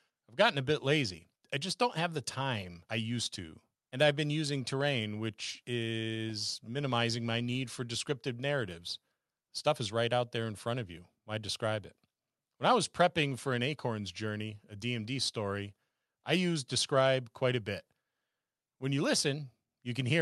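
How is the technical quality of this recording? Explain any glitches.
No glitches or faults heard.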